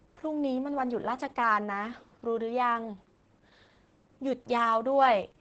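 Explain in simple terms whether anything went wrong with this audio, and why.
Something went wrong across the whole clip. The speech was squeezed hard by Opus voice compression. Nothing above 8.8 kHz survives, so it sounds muffled and dull. The coder kept only a rough outline of the sound, making the speech hoarse and slightly robotic.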